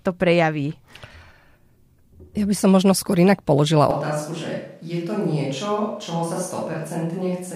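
Up to "možno skôr inak položila" the speech sounds close and full, but right after, at about 3.91 s, it suddenly turns roomy and hollow, loses bass, and drops by roughly 5 dB, with a faint bed of room noise coming up underneath. It stays that way to the end. That abrupt change in character is the classic sign of a switch to a distant microphone, likely because the close mic's feed dropped out and a farther one took over.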